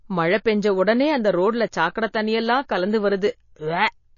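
Throughout the speech, likely MP3 compression at a low bitrate cuts everything above 7.1 kHz and leaves watery, swirly artefacts; a spectrogram shows a flat ceiling and flickering high-frequency patches.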